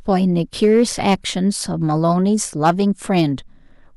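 From 0.63 to 1.14 s the speech is driven about 5 dB past what the signal path can carry, so the peaks are sheared flat. This is hard clipping, and it is heard as a harsh, gritty fuzz on the loud sounds in that stretch, because the squared-off tops add high harmonics. It happens again, equally hard, in a short burst at 2.65 to 2.70 s. A lighter overload of about 2 dB at 3.17 to 3.21 s gives a brief crackle.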